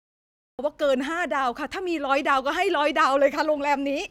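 The recording or stream began late, a cut-off start, so capture of the speech only comes in partway through a sound. From 0.0 to 0.59 s there is digital silence, and at 0.59 s the audio switches on abruptly in the middle of speech rather than with the natural rise of an onset. The opening sound is clipped off at the front, so the speech seems to begin mid-syllable with no attack or fade-in.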